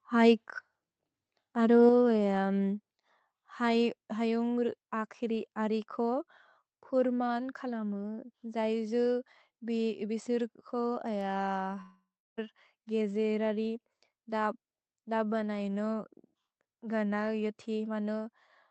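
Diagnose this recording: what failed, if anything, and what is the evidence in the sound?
At 1.89 s the speech and the background drop together by about 4 dB in a single step, and at 2.91 s they drop again by about 2 dB. Both are clean, instant level changes with no fade, which points to call processing, likely automatic gain control acting as a microphone volume stepped down on the input device, first by a larger increment and then by a smaller corrective one.

At 11.81 s a long network dropout begins and lasts to about 12.39 s, roughly 0.56 s of missing audio. The receiver extends the last sound into a decaying buzz or hiss, then holds about 0.31 s of near silence before speech resumes with that stretch gone. This is the network stage, likely packet loss over a burst, with concealment in the jitter buffer and decoder filling the gap.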